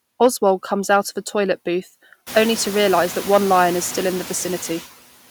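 Running through the whole speech recording are noise suppressor artifacts. The suppressor pulls down each band it judges to be steady noise, about 13 dB here, frame by frame, so the background dips in the pauses and swells back under each phrase. The fault is in that pumping, gated texture, not in the noise itself. When the room noise steps up by about 21 dB around two and a half seconds in, it remains about 16 dB below the speech.

Hard clipping appears from 0.21 to 0.48 s, overdriven by about 3 dB, and again from 0.93 to 0.97 s, by about 2 dB. The peaks went past what a stage could pass and were sliced flat, adding harmonics high in the spectrum, heard as a brief crackle on the loudest syllables. Unlike the suppressor's pumping, this is a short, hard edge on the peaks only, and it comes and goes with the signal level.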